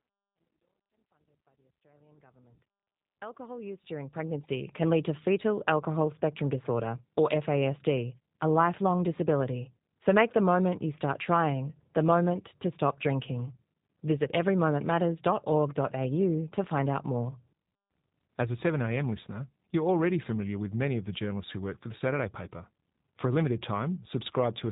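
From the start to the end, the speech carries plainly audible G.729 codec damage. It sounds band-limited below 4 kHz, slightly rough and synthetic, fitting an 8 kbit/s stream. The opening fade-in ends at 4.72 s.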